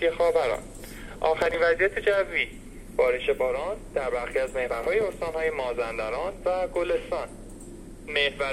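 At 1.40 to 1.54 s and again at 4.70 to 4.87 s, a burst of processor overload crackle tears through the sound. Over each stretch the processing missed several short deadlines in a row, with blocks of around 10 ms dropped outright, leaving hard-edged skips heard as gritty crackle. On a waveform these show as abrupt discontinuities and gaps; a spectrogram shows thin broadband vertical streaks clustered across each burst.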